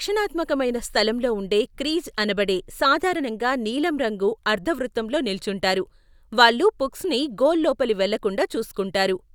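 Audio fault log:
Nothing to log here, as the speech runs along without a single fault turning up anywhere in it.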